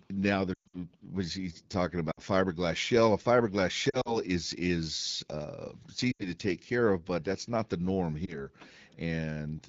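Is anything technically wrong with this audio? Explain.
Yes. The speech has lost AMR speech frames at 0.54 to 0.76 s (about 180 ms missing in short gaps, longest about 120 ms), 2.12 to 2.20 s, 3.90 to 4.17 s (scattered gaps of up to 40 ms), 6.12 to 6.28 s, and a single brief dropout at 8.25 s. Corrupted frames were discarded, and the wideband decoder filled in by repeating its last good pitch and spectral settings at falling level. The sound smears and warbles, and the longer runs fade toward silence before recovering rough.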